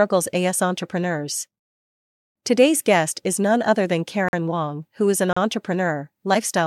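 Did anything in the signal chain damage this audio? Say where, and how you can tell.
Yes. The speech drops into dead silence twice, from 4.29 to 4.33 s (about 46 ms) and from 5.33 to 5.37 s (36 ms). Both holes have hard edges, and nothing afterwards sounds skipped. That points to a gap between stream segments at the playback stage. The clip arrives in 1-second segments, and where one segment's time stamps end short of the next one's start, the player pads the difference with silence instead of dropping audio.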